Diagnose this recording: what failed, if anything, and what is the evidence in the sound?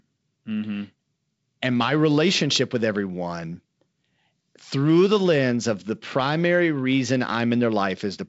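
Nothing in this speech recording has failed. The G.722 wideband telephone coding it passed through can be heard as a ceiling near 7.7 kHz, with a light hiss in the upper band and a faintly grainy lower band, which fits the 56 kbit/s mode.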